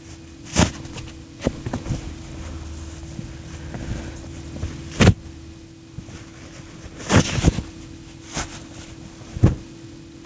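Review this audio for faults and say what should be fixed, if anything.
Gain pumping runs through the whole clip, with the level swinging by about 5 dB, which squashes loud and soft parts together. This likely comes from the input gain being set far too high, so a fast limiter clamps down on each peak and then releases. Unlike slow level drift, every swell and duck follows the loud sounds. Lowering the microphone gain so the limiter rarely engages would prevent it.

The top end stops at 8 kHz, which fits a wideband call codec such as G.722.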